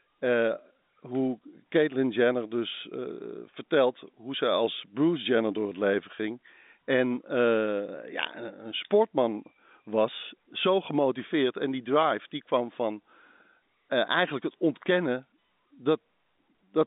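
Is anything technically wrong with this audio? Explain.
No, nothing technically wrong can be heard here.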